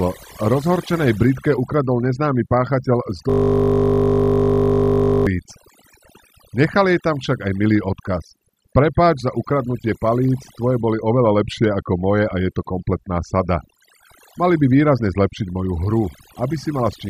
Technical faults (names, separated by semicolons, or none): overdone noise removal; system hang loop